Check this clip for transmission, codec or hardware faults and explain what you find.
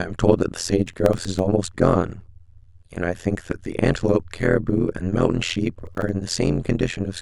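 Two faults are present in this speech clip.

Throughout, frames were overlap-added with windows that don't sum evenly. This overlap-add ripple swings the level by about 60 dB around 100 times a second, giving a metallic buzz with extra tones around each note.

From 0.86 to 1.39 s and from 5.74 to 6.13 s, the processor missed buffer deadlines repeatedly and replayed stale audio. This processor overload crackle sounds like gritty tearing, consistent with buffers of roughly 5 ms.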